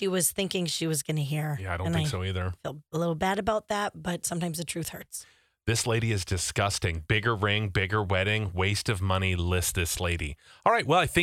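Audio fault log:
No technical faults can be heard anywhere in this speech recording, and the signal path shows nothing that calls for attention.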